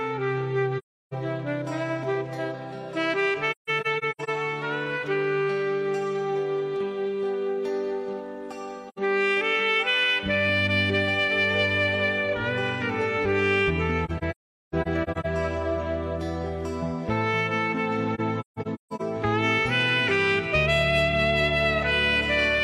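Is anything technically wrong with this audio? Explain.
Yes, there's AAC frame loss with muting, giving soft-edged holes at 0.78–1.14, 3.51–4.30, 8.89–8.98, 14.05–15.26 and 18.14–19.01 s. Lost frames are decoded as silence, and the overlapping windows fade each gap in and out. The longer stretches are choppy, broken into several dropouts rather than one, with the worst single gap near 14 s lasting about 400 ms.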